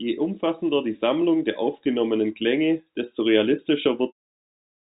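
Nothing is technically wrong with this speech recording. Its sound has the narrow band of G.711 telephone coding, with nothing above 3.8 kHz, and a smooth fade out begins at around 4 s and finishes at 4.13 s.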